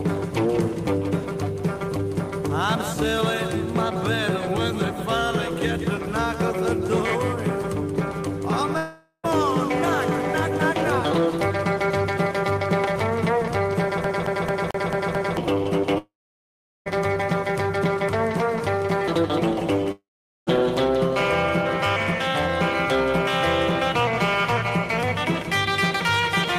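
The audio breaks off three times, at 8.77 to 9.26 s, 15.98 to 16.88 s and 19.92 to 20.49 s. Each time the last sound smears into a fading buzz, then silence, and playback resumes with about 0.46 s, 0.88 s and 0.56 s lost, most likely from a long network dropout. From 14.04 to 15.37 s a 221 ms segment plays six times with a brief mute at each jump. This is the rapid, even stutter of a CD stuck on one turn, where a scratch throws the laser back a track every rotation.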